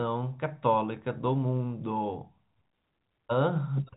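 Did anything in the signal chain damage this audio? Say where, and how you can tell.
No, nothing in the chain damaged this speech; the G.711 telephone coding is doing its normal job, with no content above about 3.8 kHz.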